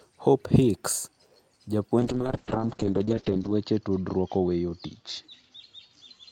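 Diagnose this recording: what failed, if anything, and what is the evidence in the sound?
Call bitrate drop, at the codec stage, starting at 2.0 s and lasting to the end. The bandwidth estimate fell, so the encoder coded far more coarsely. High frequencies collapse from 20 kHz to 8 kHz. Speech turns rough and muffled, consistent with roughly 7 kbps, bottoming out for about 1.5 s.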